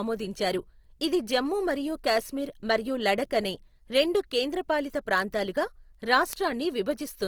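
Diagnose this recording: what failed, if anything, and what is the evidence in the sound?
The speech sounds rough and grainy throughout, with tonal parts turned noisy but no swirling holes, and the band stays full to about 20.3 kHz. This is likely Opus compression at the codec stage, in its CELT music mode, consistent with a bitrate around 24 kbps.

Sharp word clock ticks of uneven strength recur steadily about every 0.4 s, some twenty in all, from 0.17 s to 7.10 s. A converter on an unlocked digital link, drifting roughly 50 ppm from the sender, slips one sample at each crossing.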